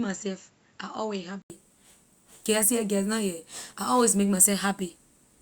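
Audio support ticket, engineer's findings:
Speech dull and band-limited 0.0 to 1.5 s, nothing above 7.6 kHz, level roughly 5 dB down. Different noise floor, around 35 dB under signal. 80 ms gap at 1.5 s, then full band returns. Likely input switched to a poorer device.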